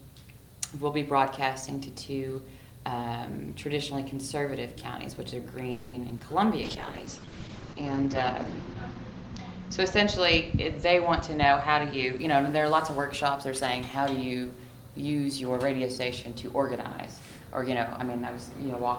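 At 5.71 s the audio stalls for about 0.24 s in what sounds like a call audio freeze. The last sound is stretched into a fading buzz that fills 220 ms, and delivery was most likely held up long enough to empty the jitter buffer. Nothing is lost, so 220 ms of extra delay is added.

Two short concealed packet losses follow at 6.09 to 6.12 s and 6.18 to 6.21 s. In each, the decoder patched only about 10 ms with continued sound, and 40 ms and then 20 ms of real audio never play. The gaps come across as brief smears or wobbles, with a fragment of the sound skipped, and about 30 ms of the earlier delay is recovered.

From 6.63 s to 12.25 s a call bitrate drop takes the encoder from 32 kbps down to 8 kbps, staying at the floor for about 1.58 s. Bandwidth narrows from 20 kHz to 8 kHz, so the sound turns muffled and coarse, with a watery texture.

Overlapping that, from 11.35 s to 14.05 s, a jitter buffer speed-up plays the audio at 108% to shed the backlog. 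Pitch-period slices totalling around 200 ms are cut out, so the sound runs hurried at unchanged pitch.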